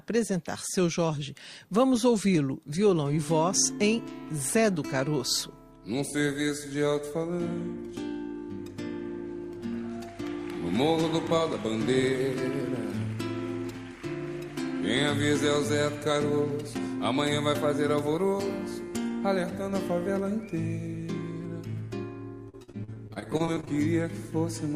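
From 22.49 to 23.69 s, repeated packet loss leaves short holes, up to 43 ms, patched with the last sound, giving choppy audio across about 28% of the stretch.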